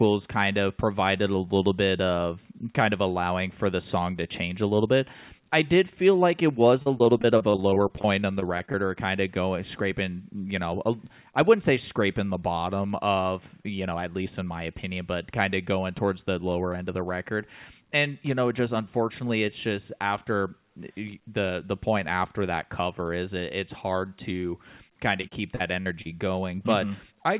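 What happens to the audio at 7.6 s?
Packets keep getting lost from 6.82 to 8.75 s, between "feel like it was" and "or kind of going," and each gap of up to 38 ms is patched by extending the last sound. This repeated packet loss makes the speech choppy and robotic.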